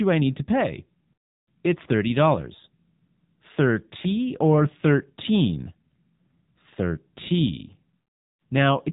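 Throughout the clip, the speech was squeezed through the AMR narrowband mobile codec at a low bit rate, plainly enough to fit the 7.4 kbps mode. Everything above 4 kHz is gone, and the sparse pulse excitation leaves the voice buzzy, thin and synthetic.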